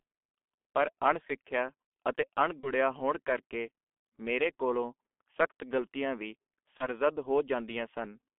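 Speech throughout carries the heavy damage of the G.723.1 codec: the band is squeezed to roughly 250 Hz to 3.4 kHz, so the voice sounds muffled and hoarse and consonants smear together, which fits a very low bitrate near 6 kbit/s with slow, coarse updates of the voice model. On a spectrogram the energy stops sharply just above 3.4 kHz, with a bare strip below 250 Hz and blocky, smoothed harmonics where fine detail should be. VoIP packet loss concealed by the speech codec breaks in twice: from 2.60 to 2.71 s, just before "ਹੋਣ ਕਰਕੇ ਮੇਰੇ ਕੋਲੋਂ", and from 6.77 to 6.87 s, right after "ਕੋਲੋਂ ਸਖਤ ਗਲਤੀਆਂ ਵੀ". Each time the decoder fills the gap by repeating its last pitch and filter, which fits a single lost 30 ms frame. It produces a brief stretched sound whose level sinks, and the voice stays weak for several tens of milliseconds afterwards. A spectrogram shows a flat, frozen spectrum there, and the waveform shows a dip in level that recovers gradually rather than cleanly.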